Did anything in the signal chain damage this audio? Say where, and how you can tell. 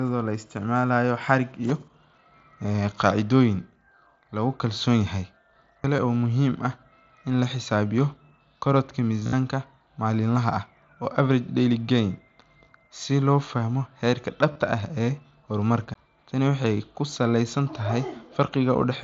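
Yes, at two stages. The first is playback from disc. At 5.84 s and again at 15.94 s there is a tick with a very brief dropout, a few milliseconds in the first case and about 15 ms in the second. The sound then resumes from a different point rather than continuing where it left off. That is a CD skip. The laser lost its track and landed on another turn of the spiral, and the player muted briefly before carrying on from the new position.

The second is the wireless headset link, where concealed Bluetooth headset packet loss occurs. At 5.97 s and from 14.52 to 14.56 s, about 15 ms and 30 ms of audio are lost and patched over. From 9.21 to 9.33 s, about 90 ms is lost across 120 ms, with a run of 60 ms, and that stretch comes through as a buzzy, held tone ending in a slight warble. The receiver was filling the gaps by repeating recent waveform. The mSBC wideband codec on this link carries the audio with only light grain.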